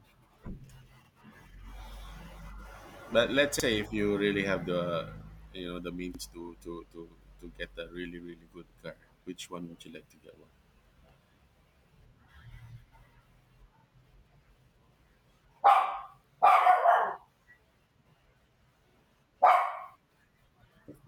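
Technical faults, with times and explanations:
1.05, 3.60, 6.15, 8.70, 11.25, 13.80, 16.35 and 18.90 s: overlapping chunks. The speech was handled in 2.5 s blocks, each starting 50 ms before the last ended, so that sliver replays at every join. You hear a quick stutter, e.g. right before "car which one would".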